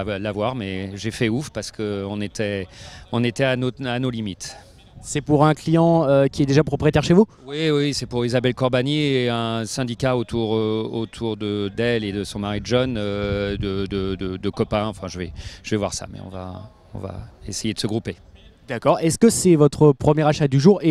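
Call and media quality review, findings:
Nothing stood out on listening that would call for a finding against any part of the call or media path.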